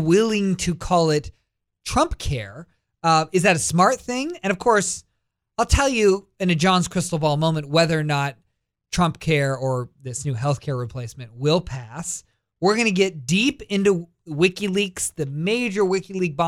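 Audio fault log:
Nothing stood out on listening to this speech recording.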